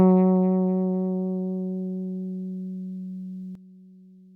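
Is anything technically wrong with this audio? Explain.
Yes, there's a sudden gain jump at 3.55 s: sound and background drop together by about 11 dB, most likely a digital gain change applied without any ramp.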